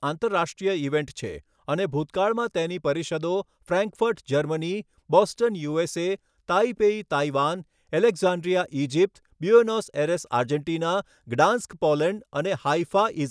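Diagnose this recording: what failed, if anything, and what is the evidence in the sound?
Nothing in this speech recording points to a failure at any stage of the chain. No event in the sound serves as evidence of a fault, so there is nothing here to diagnose.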